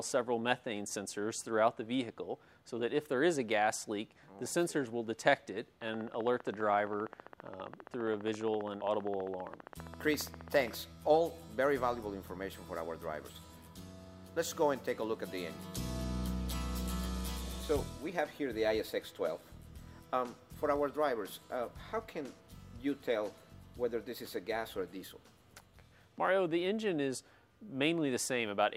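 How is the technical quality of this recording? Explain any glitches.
There's one glitch worth flagging. From 5.82 to 10.75 s a train of clicks ticks along at a steady 15 per second, about seventy in all, poking a few dB above the sound, likely from interference or a faulty connection.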